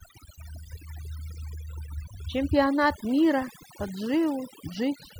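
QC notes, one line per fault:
Throughout, overdone noise removal. The gaps between phrases drop to near silence with twinkling specks. A noise reduction process was pushed too hard. It pulls individual frequency bands far down whenever they sit close to its noise estimate. Quiet parts of the voice fall into that range, so they are stripped along with the noise. Stray bands that flicker past the threshold leave the glittering residue.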